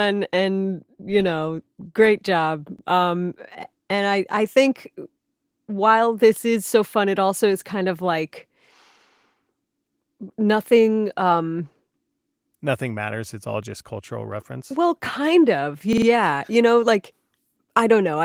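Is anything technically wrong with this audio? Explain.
Yes, there are two repeated buffer stutters in the speech, at 2.79 to 2.83 s and 15.93 to 16.07 s. Audio arrived late, so the player replayed its last chunk of about 46 ms, which fits a 2048-sample buffer. It plays once extra the first time and three extra times the second, each with a hard join, though nothing seems lost. The Opus voice compression underneath is working as expected, with only light codec damage.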